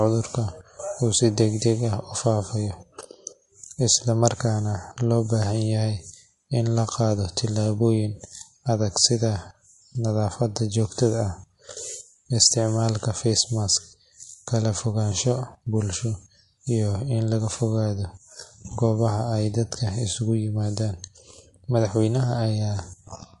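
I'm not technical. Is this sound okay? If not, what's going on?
No. The speech was likely squeezed too hard by MP3 compression, which throws away detail to save space, so it sounds watery and swirly throughout, with chirpy s sounds.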